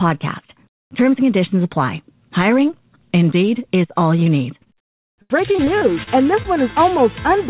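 Short concealed packet loss occurs at 4.24 to 4.28 s and again at 4.64 to 4.68 s. Each time, about 20 ms of audio failed to arrive. The receiver bridged the hole by extending the preceding sound before blending back, leaving a brief smear or wobble at each point.

Repeated packet loss (robotic sound) runs from 5.22 to 6.46 s. Seven gaps arrive in quick succession, the longest about 73 ms, and together they account for roughly a fifth of that stretch. Each patched hole is followed by another, so the sound turns choppy, with fragments missing. Throughout, the band stops at 4 kHz, which points to G.711 mu-law telephone coding on the call path.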